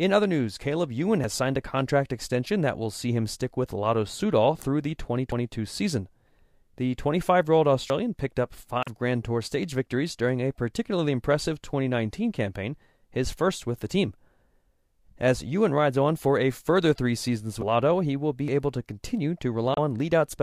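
A dropped buffer at 5.32 s, after "through the", and again at 7.9 s, between "year old" and "picked up", is heard as the speech jumping ahead, likely an overrun discarding roughly 70 ms each time. Damaged data in a compressed stream follows at 8.82–8.88 s, just after "picked up", then at 17.59–17.63 s and 19.74–19.79 s. Each is a brief disruption where the decoder misreads corrupted frames and resyncs.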